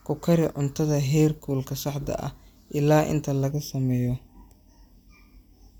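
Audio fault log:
3.51–5.80 s, channel delay (comb filtering): just after "saxda ah ilaa inta" the speech turns hollow and phasey through to the end of the clip, with a fixed coloration that doesn't move. One channel arrives late by a fraction of a millisecond, roughly 0.4 ms, and the two are summed to mono. The shared sound cancels at evenly spaced frequencies, the first notch falling around 1.5 kHz, which carves the comb-like gaps heard.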